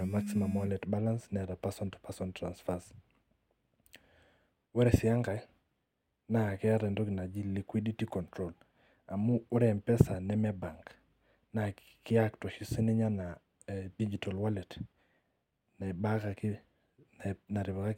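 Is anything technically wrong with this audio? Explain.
No, no technical faults heard.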